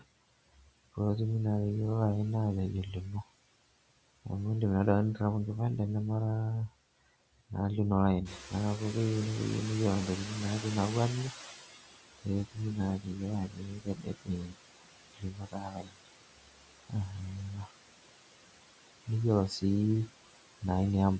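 Noise suppressor artifacts run through the whole speech recording. The suppressor pulls steady-noise bands down by about 18 dB frame by frame, so the background sinks in pauses. Noise suppressor catching up occurs from 8.25 to 11.75 s. When the room noise jumps about 12 dB near 8.5 s, the suppressor's estimate lags, so the louder noise comes through first and settles over about 3.5 s to roughly 16 dB of reduction. Speech cut by the noise suppressor happens at 8.29–8.53 s, 12.23–14.56 s, 15.14–16.09 s, 16.44–16.92 s and 17.51–17.77 s. There, quiet speech is mistaken for noise and dropped by about 13 to 19 dB, so endings and soft sounds come out swallowed. The top end stops at 8 kHz, as expected from the call microphone processing.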